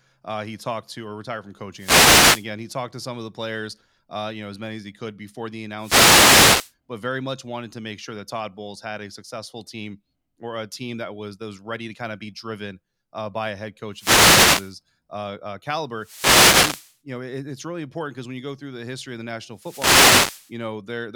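Speech recorded through an analogue FM wireless microphone is hit by wireless microphone noise five times: 1.75–2.48 s, 5.77–6.74 s, 13.92–14.75 s, 15.96–16.98 s and 19.53–20.55 s. Each burst of static lasts about 0.7 to 1.0 s. The radio signal fades as reflections cancel, and receiver noise rises over the speech.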